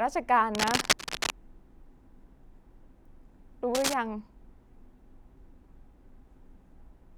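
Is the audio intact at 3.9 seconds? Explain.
No. From 3.75 to 3.94 s a cable scratch noise rides over the speech at roughly its own level: a dense, uneven rustle, likely from a worn cable or connector being moved. Unlike a single click, it is a continuous scratchy burst.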